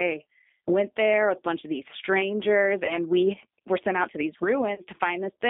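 Throughout, the G.729 codec's 8 kbit/s model-based coding limits the speech to 200 Hz to 3.6 kHz and leaves a plainly rough, synthetic edge. At 2.86–2.98 s and 4.75–4.83 s, VoIP packet loss concealed by the speech codec extrapolates the last pitch into a fading buzzy tone or coloured noise. This fits two and then three lost 10 ms frames, and the sound stays weakened briefly afterward.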